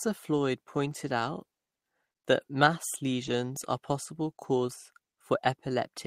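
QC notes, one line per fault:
3.23–3.29 s, lost packet rebuilt from error correction: after "that mass", the speech turns briefly rough and noisy but never drops out. A low-bitrate backup copy filled about 40 ms, which fits two lost 20 ms packets.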